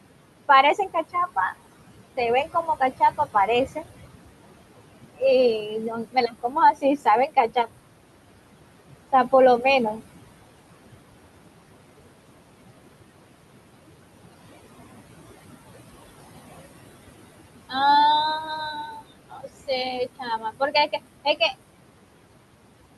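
Noise suppressor artifacts run through the whole clip. The suppressor pulls the steady room noise, which sits about 12 dB under the speech, down by about 21 dB between phrases, so what's left of the background sinks in the gaps and rises back up under the talking.

On top of that there's speech cut by the noise suppressor, where it mistakes quiet speech for noise and turns it down with the background: 0.48–1.57 s, 2.17–3.84 s, 5.61–7.68 s, 9.12–10.01 s, 18.86–19.69 s and 20.19–20.93 s. Drops reach about 11 to 19 dB. The stretch around 6 s is the worst, losing roughly 0.7 s, and those bits sound swallowed.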